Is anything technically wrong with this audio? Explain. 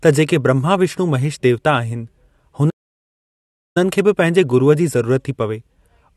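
Yes, there's a playback stall. The speech cuts out mid-flow at 2.69 s and stays silent until 3.77 s, roughly a second of dead air. Most likely the player ran short of data or its thread got blocked, so output simply halted until it caught up.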